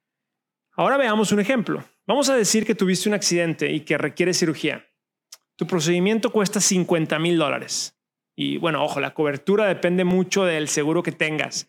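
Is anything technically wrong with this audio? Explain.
Yes. At 2.63 s, between "a decir" and "que tuviste un accidente", and at 10.11 s, just after "ojo la cobertura depende", the speech jumps ahead. About 20 ms goes missing each time, most likely a dropped buffer (overrun) that was overwritten before being read.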